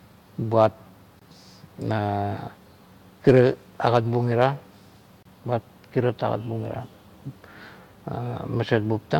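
A speech clip with two gaps between stream segments, at 1.19 to 1.22 s and 5.23 to 5.25 s: hard-edged silences of about 22 and 28 ms where segment timestamps failed to meet. Unlike a dropout, no audio is lost; the speech resumes exactly where it stopped, which fits 2-second segments.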